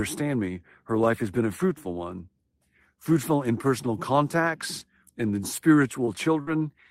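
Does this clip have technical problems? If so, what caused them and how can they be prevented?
Yes. A lost packet rebuilt from error correction occurs at 4.15, 4.79, 5.43, 6.07 and 6.47 s, each covering 20 ms. In every case a packet went missing, but the following packet carried a low-bitrate backup copy, and the decoder played that instead. There is no gap, but these short stretches of speech sound rougher and noisier than their surroundings. To prevent this, reduce network packet loss with a more stable connection or prioritised traffic, so the backup copies are rarely needed.

Short concealed packet loss occurs at about 6.05 to 6.09 s. Here 20 ms of audio never arrived in time and had no usable backup. The receiver covered about 16 ms of the hole by extending the last sound, from its pitch where it was voiced and as shaped noise where it was not, before blending into the rebuilt frame at 6.07 s. 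The result is a brief smear or wobble. To prevent this, give the receiver a slightly deeper jitter buffer so late packets can still be played.

A burst of packet loss runs from about 6.41 to 6.49 s. Consecutive packets failed to arrive, so 60 ms of speech is missing. The receiver stretched the preceding sound across about 56 ms, fading it out into a held buzz or hiss, and the rebuilt frame at 6.47 s then brought the audio back, with the lost material skipped. To prevent this, fix the congested or unstable link that is dropping packets in clusters, for example by moving from Wi-Fi to a wired connection.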